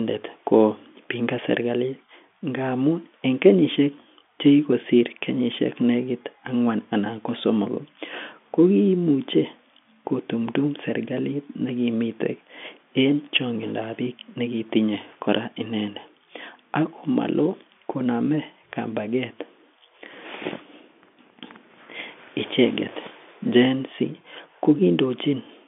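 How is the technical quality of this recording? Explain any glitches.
No glitches can be heard; the speech arrives as a normal G.711 telephone signal, confined to the usual line band of 200 Hz to 3.5 kHz with nothing above 3.7 kHz, and nothing interrupts or disturbs it at any point.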